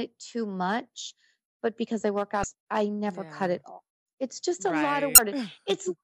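At 2.41 to 2.44 s and again at 5.15 to 5.19 s, damaged data in a compressed stream gives a brief glitch of about 35 ms. The decoder misreads corrupted frames and resyncs, leaving a short vertical smear of disordered energy on a spectrogram and a jagged glitch in the waveform.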